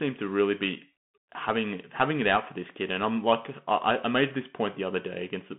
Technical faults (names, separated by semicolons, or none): Bluetooth CVSD headset codec